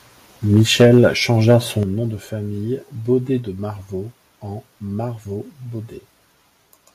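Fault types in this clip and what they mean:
Microphone overload: From 0.53 to 1.06 s the loudest speech peaks turn harsh and crackly, pushing about 6 dB past the converter's limit. A shorter, milder burst follows at 1.47 to 1.52 s, about 1 dB over. In each stretch a few percent of the samples sit flat against the converter's limit. The likely cause is a microphone input level set too high, so the converter chops off the waveform tops and adds that gritty edge.
Microphone volume stepped down: The speech and the background behind it drop together in sudden single steps. These come at 0.82 s (about 2 dB, during the first distorted stretch), at 1.83 s (a larger drop of about 8 dB, just before "nom de famille"), and again at 3.39 s (about 2 dB). This is likely the call software reacting to the clipping by cutting the device's input gain abruptly instead of fading it.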